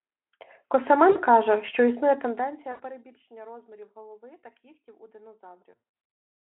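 At 1.11 s, 2.72 s and 5.71 s this speech shows VoIP packet loss concealed by the speech codec. Lost gaps of about 40 ms and 80 ms, which fits two and four 20 ms frames, are filled by the decoder stretching its last pitch and filter into a fading buzzy tone or coloured noise. Near 5.71 s some 260 ms goes missing across 400 ms, runs up to 80 ms, leaving the voice weak or distorted. The narrowband Speex sound stays weak briefly afterwards.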